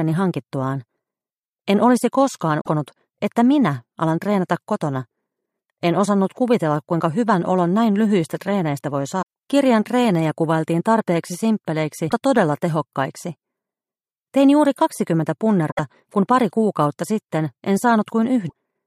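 Brief glitches at 2.60–2.68, 9.21, 12.06–12.12, 15.69–15.80 and 18.46–18.52 s come from damaged data in a compressed stream: corrupted frames are misdecoded until the decoder resyncs.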